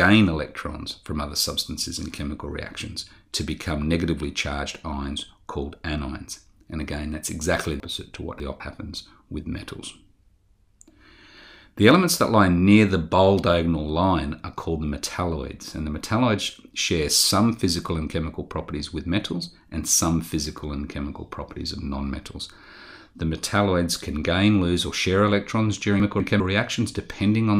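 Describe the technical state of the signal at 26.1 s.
At 26.1 s the signal is hit by chunks out of order: between 26.0 and 26.4 s one 200 ms chunk was delivered a slot late, so two neighbouring chunks play swapped. Nothing is missing, but the passage sounds briefly jumbled, with three hard joins.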